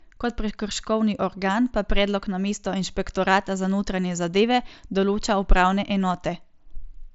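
No technical faults can be heard in the speech, which carries the wideband character of a Bluetooth mSBC headset codec link, with nothing above about 7.7 kHz and only a light graininess on louder sounds from the codec itself.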